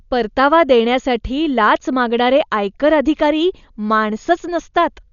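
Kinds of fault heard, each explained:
Dolby Digital compression: the speech is heavily dulled, with nothing above 6.9 kHz and a rough, fluttering noise around voiced sounds, fitting a bitrate near 48 kbps. An AC-3 encoder is the likely cause: starved lines get dither noise, not MP3's watery swirl.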